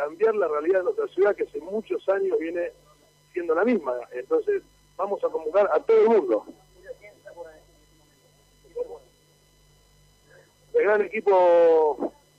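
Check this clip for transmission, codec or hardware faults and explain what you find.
I found no faults to explain in this clip.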